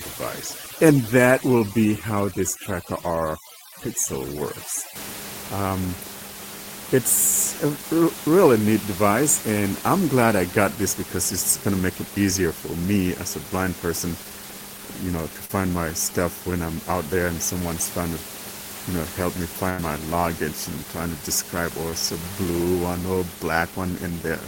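A speech recording opens with a near-silent background flecked with twinkling specks from 0.00 to 4.96 s. That is overdone noise removal: the suppressor was set so hard that bands near its noise estimate, and the quieter parts of the voice with them, were pulled down or switched off. At 15.45 to 15.51 s there is a brief smear where about 40 ms of audio never arrived. This is short concealed packet loss: the receiver extended the preceding sound to fill the hole, then blended back into the real signal. From 19.69 to 19.80 s the sound becomes a held, fading tail, and then resumes with roughly 80 ms gone. That is a burst of packet loss, where consecutive packets failed to arrive in time and the decoder kept stretching the last sound while turning it down until real audio returned. Underneath, the room noise sits about 13 dB below the speech.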